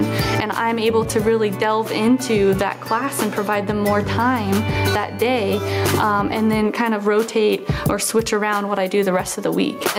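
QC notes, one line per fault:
Throughout, gain pumping: loud and soft parts sit closer in level and the sound is squashed, a swing of around 15 dB. The likely cause is input gain set far too high with a fast limiter clamping it, unlike a noise gate, which mutes the gaps instead of lifting them.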